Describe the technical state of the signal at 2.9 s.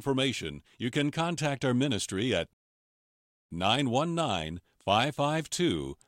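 At 2.9 s the signal sits inside a rebuffering stall that runs from 2.53 s to 3.51 s, just after "contact our ministry at". The player exhausted its downloaded audio and paused until more arrived, so the speech breaks into silence and then resumes exactly where it left off, adding about 0.97 s with nothing lost. On a waveform it appears as a flat gap; on a spectrogram, an empty vertical band across all frequencies.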